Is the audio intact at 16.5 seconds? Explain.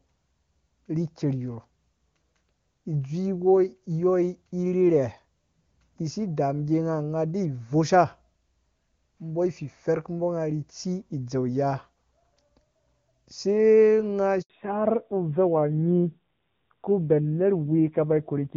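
No. At 16.5 seconds the call is in a fallback to narrowband, which begins at 14.50 s and lasts to the end of the clip. The link has switched from wideband AMR-WB coding to an older narrowband codec, and the rougher texture fits AMR-NB at a low rate of about 7.4 kbit/s. Nothing above 4 kHz survives, so the speech sounds duller and raspier. A spectrogram shows a flat ceiling cutting off all energy at 4 kHz from 14.50 s on.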